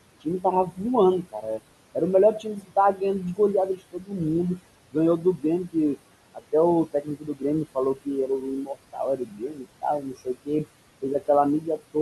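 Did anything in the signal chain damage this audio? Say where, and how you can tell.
Yes. The damage happens at the call-processing stage, in the noise suppressor. Noise suppressor artifacts run through the whole clip. The room noise sits about 16 dB below the speech. The suppressor pulls that background down by about 21 dB in the gaps, then lets it back up under the speech. So the floor pumps in and out with each phrase.

The suppressor also cuts speech. Between 0.21 s and 11.96 s, softer parts of the speech are treated as noise and pushed down with the background, at worst by about 21 dB. Quiet consonants, word endings and low-level stretches come out swallowed or faint. In total, roughly three seconds of speech are affected. The cuts follow the same gating as the noise, which shows the suppressor caused them rather than the talker.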